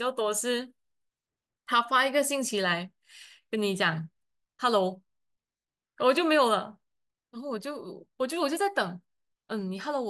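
The speech recording carries no audible technical faults, with the signal holding steady and intact across its whole duration.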